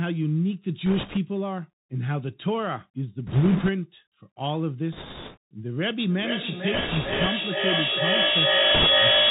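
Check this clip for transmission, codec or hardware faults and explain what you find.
Three problems show up here: the whole clip goes through a Bluetooth headset codec, there are short bursts of bit errors on that link, and a feedback howl takes over the last few seconds.

The Bluetooth CVSD headset codec runs from start to finish, and its damage is easy to hear. CVSD sends one bit per sample at 64 kHz, just saying step up or step down, with the step size adapting as it goes. That caps the speech below 4 kHz, so it sounds boxed-in. S sounds come out scratchy, louder bright moments smear where the step can't keep up, and there's a grainy hiss sitting underneath the voice.

Bit errors on the Bluetooth voice link hit in five bursts: 0.86 to 1.17 s, 3.27 to 3.70 s, 4.92 to 5.37 s, 6.74 to 7.27 s, and a short one at 8.75 to 8.87 s. The error rate in each is a few percent. CVSD gives every bit the same small weight and errors fade out quickly, so you don't get sharp clicks. 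Instead each burst lays a rushing, crackly texture over the speech.

The feedback howl starts at about 5.95 s and keeps going to the end. Two devices in the same room are on the call, and the mic-to-speaker loop gains level on every pass. So the repeats build instead of dying away and narrow down to the frequency the loop favours. Here that's a tone around 3 kHz, with the loop coming round roughly every 400 ms, and at its peak it's about 7 dB louder than the speech. It never breaks, because nothing interrupts the loop before the clip ends.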